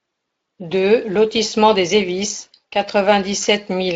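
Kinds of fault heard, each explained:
No fault can be heard in this speech clip. It has passed through the Speex codec at a fairly high setting, with only light coding texture and no content above about 7.5 kHz.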